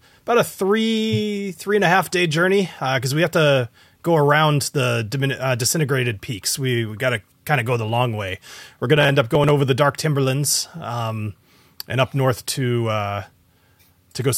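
A speech clip with processor overload crackle from 8.97 to 9.50 s, just before "over the dark timberlands". The processor misses about ten buffer deadlines. Each skipped buffer leaves a hard-edged gap. The tiny gaps point to buffers under a millisecond and merge into gritty tearing.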